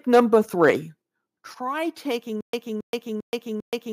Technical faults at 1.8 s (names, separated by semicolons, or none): none